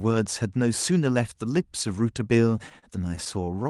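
Repeated stalls (stutter) run from 2.69 to 3.67 s, near the end of the speech. Packets reached the receiver late or too slowly, so its jitter buffer emptied nine times in under a second. Each time, the receiver stretched the last sound to cover the wait, the longest about 37 ms, adding roughly 131 ms in total while losing nothing. The speech drags and hiccups, with brief smeared holds. Above about 12 kHz the call path's bandwidth limit removes the top end.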